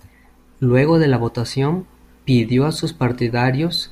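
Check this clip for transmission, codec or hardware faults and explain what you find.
No faults turn up in this clip.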